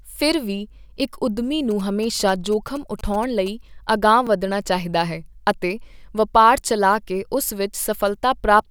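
From 1.71 to 3.48 s, just after "ਫਿਰ ਵੀ ਇੱਕ ਉਦਮੀ", a nearby 2G phone is signalling, and the audio circuit rectifies its radio pulses. These GSM signalling bursts come through as a galloping dit-dit-dit of short 217 Hz buzzes, around 20 dB below the speech.

Twice, fresh audio failed to arrive in time and the device replayed its last buffer, a repeated buffer fault. From 2.16 to 2.18 s a 10.67 ms piece plays two extra times, and at 4.27 s, just before "ਚਾਹੀਦਾ ਹੈ ਅਤੇ ਵਪਾਰ", it plays once more. Each sounds like a brief click-buzz, which fits a 512-sample buffer.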